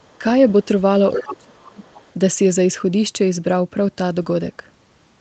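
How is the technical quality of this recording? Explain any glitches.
The recording has two kinds of call glitch, both packed into the first couple of seconds. The audio tops out around 8 kHz, which is consistent with a call path running Opus at a modest bitrate.

Other side's voice leaking through: there's a second voice sitting underneath, very faint from 0.0 to 0.19 s, then much more noticeable from 1.18 to 1.33 s, with a tiny faint blip at 1.53 to 1.57 s and a quiet tail from 1.82 to 2.14 s. The likely cause is the far end playing out of a loudspeaker and the echo canceller not fully scrubbing it from the mic, so scraps of it slip through.

Speech suppressed in double talk: the talker's own level gets pushed down when the two sides overlap. There's a brief, mild dip at 0.19 to 0.24 s. The big one runs from 1.14 to 1.82 s, where the voice drops away hard, by something like 30 dB at its deepest, for most of that stretch. 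That's likely the echo canceller failing to tell the local talker from the echo and clamping down on everything, so the voice sounds ducked or half-missing right where the leaked voice shows up.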